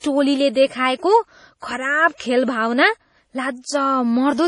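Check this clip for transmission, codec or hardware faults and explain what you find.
Two problems show up here: heavy codec damage running through the whole clip, and a couple of pre-echo smears on sharp onsets.

Throughout, the speech sounds watery and swirly, with nothing above 10.5 kHz. That's likely MP3 compression at a very low bitrate, something around 32 kbps. The encoder lops off the treble and drops weak frequency lines that flicker in and out frame to frame, which gives that warbly texture.

Pre-echo hits at 0.53 to 0.55 s and again at 2.18 to 2.20 s, spreading roughly 24 to 26 ms ahead of each attack. The codec smeared quantisation noise across the whole block, so a brief hiss leaks in before the onset and the attack itself sounds soft.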